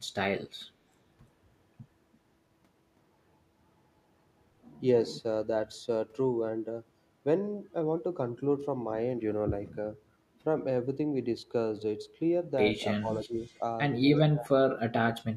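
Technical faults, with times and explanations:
13.0–13.61 s and 14.31–15.08 s, speech suppressed in double talk: the speech sinks by about 10 dB in the first stretch, then nearly vanishes at about 30 dB down in the second, roughly half a second each time. Likely an echo canceller mistaking overlapping talk for echo and ducking it.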